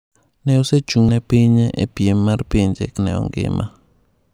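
At 1.09 s and 2.99 s the speech skips forward, likely audio missing between chunks: about a tenth of a second vanishes at each chunk boundary, spliced without the silent gap a dropout would leave.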